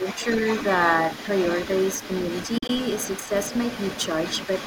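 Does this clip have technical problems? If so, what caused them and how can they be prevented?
Yes. A second, fainter voice sits under the speech for the whole clip, about 15 dB below it. This is other side's voice leaking through: the far end was likely played on the talker's loudspeaker and picked up again by the microphone, and the echo canceller left a residue instead of removing it completely. Preventing it means using a headset, or tuning the echo canceller so it converges fully on the loudspeaker-to-microphone path.

From 2.58 to 2.70 s the audio breaks into short holes, about 53 ms missing out of roughly 107 ms. The longest single gap is 40 ms, and the sound resumes each time as though it had kept playing underneath. This is a Bluetooth dropout, likely caused by packets arriving too late at the headphones and being discarded, which fits several lost packets. Keeping the headphones close to the source and reducing 2.4 GHz interference prevents it.

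Between 3.23 and 3.31 s the talker's level dips sharply, roughly 10 dB at its deepest, over about 70 ms while the far side is also active. This is speech suppressed in double talk: the echo canceller likely could not tell the near talker from the loudspeaker echo and attenuated both together. A canceller with better double-talk detection, or a headset that removes the echo path entirely, avoids this.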